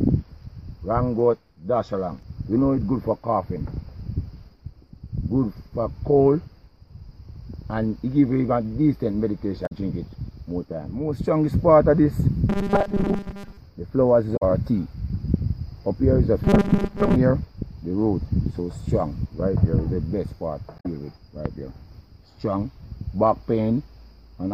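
Damaged data in a compressed stream produces brief glitches at 9.63–9.72, 14.33–14.42 and 20.76–20.86 s. The decoder loses sync on bad frames. Robotic sound from repeated short buffers appears at 12.50–13.57 and 16.44–17.16 s as a rigid 200 Hz buzz. Late-arriving audio is likely replaced by repeats of a 5 ms buffer, with most of the real sound skipped.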